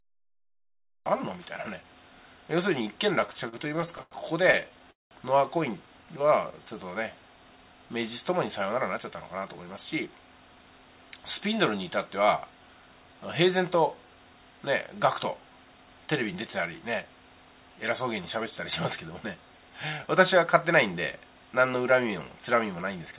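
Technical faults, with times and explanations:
0.00 to 1.06 s, cut-off start. The clip opens in digital silence. At 1.06 s the sound begins abruptly, already mid-event, with no attack or fade. Capture or streaming began late, so the true onset was never recorded.
3.20 to 5.13 s, repeated stalls (stutter). Twenty brief pauses hit this stretch, the longest about 0.2 s. Late packets kept draining the jitter buffer. Each time, the receiver stretched the last sound, filling about half a second in all. Nothing is lost, but it drags and stutters.
8.69 to 10.07 s and 15.77 to 17.04 s, jitter buffer speed-up. Extra audio had piled up in the buffer. The receiver cut out short pitch-period slices, about 150 ms and 70 ms. Playback ran 9% and then 6% fast at unchanged pitch, sounding hurried.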